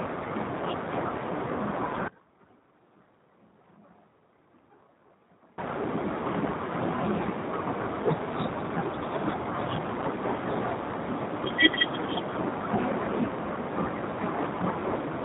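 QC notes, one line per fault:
throughout: G.729 codec. The speech has the plainly audible roughness of an 8 kbit/s CELP-style coder, most likely G.729A. Each 10 ms frame is rebuilt from a vocal tract filter, a pitch predictor and a few fixed pulses, not from the waveform itself, so voicing sounds slightly buzzy and synthetic. Bandwidth is capped at telephone range, with nothing above 4 kHz, which makes sibilants dull and the overall tone narrow.
9.44–9.47 s: VoIP packet loss concealed by the speech codec. A brief stretch of about 30 ms turns smeared, with the speech replaced by a stretched continuation that fades. This fits a single lost 10 ms frame that the decoder filled by repeating its last pitch and filter settings at reduced gain. Because each frame depends on the previous one, the signal stays weakened for a short while after packets resume before the coder recovers.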